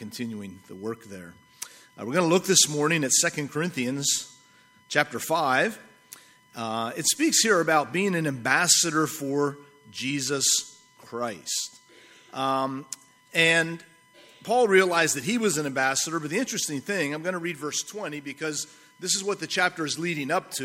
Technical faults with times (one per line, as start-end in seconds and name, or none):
0.00-20.64 USB whine